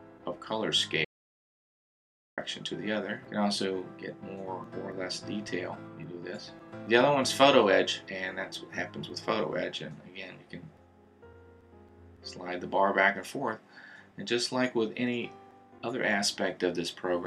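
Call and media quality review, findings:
Audio dropout to silence, 1.05 to 2.38 s. Sound cuts out mid-flow and returns abruptly. Gap is silent, no room tone. About 1.33 s of content lost. Likely cause: input path lost upstream, such as device disconnect, link failure or stray mute. Recorder kept writing silence through the outage.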